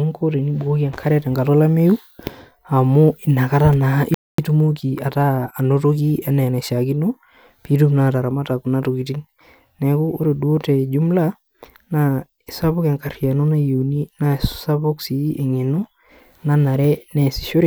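A speech recording, interrupted by a playback stall at 4.14 s: the audio cuts to silence mid-flow for about 240 ms and resumes at 4.38 s. The likely cause is the player's buffer running dry or its audio thread being blocked long enough that nothing reached the output. Immediately after, from 4.38 to 6.78 s, there is time-compressed catch-up. The speech runs roughly 1.1 times faster than normal, but its pitch stays unchanged. The player is trimming its accumulated backlog by removing short slices and cross-fading the joins, which gives the hurried delivery. Normal pacing returns at 6.78 s, once the roughly quarter-second deficit from the stall has been absorbed.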